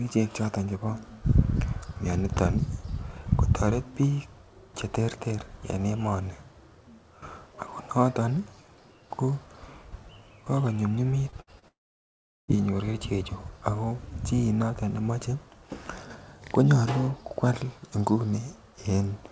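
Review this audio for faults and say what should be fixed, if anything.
A brief smear appears at 11.30–11.35 s and again at 11.59–11.65 s. This is short concealed packet loss: about 30 ms of speech never arrived, and the decoder extended the previous sound to bridge each gap.

At 11.41–11.50 s the gap is bridged by a continued sound that fades as it goes. This is a burst of packet loss: about 60 ms went missing, and concealment stretched and attenuated the last sound before the speech picked up further on.

From 11.68 s to 12.57 s there is a short fading tail, then about 0.75 s of silence, and the speech resumes with roughly 0.8 s skipped. The likely cause is a long network dropout that the receiver could only cover with fading concealment before going quiet.

All of this sits within the band-limited G.722 sound, which has nothing above 8 kHz. To prevent it, stabilise the network link, or add forward error correction and a deeper jitter buffer so lost or late packets can be recovered rather than concealed.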